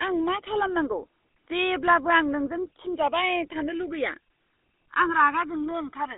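GSM full-rate codec damage runs through the entire speech clip, from start to finish. The sound is squeezed into a telephone band of roughly 250 Hz to 3.7 kHz, with nothing above 3.8 kHz, which fits the 13 kbps full-rate mode. The codec reduces the voice to a vocal-tract model excited by a sparse, regularly spaced pulse train. That coarse excitation leaves a plainly audible buzzy, gravelly roughness over every part of the speech.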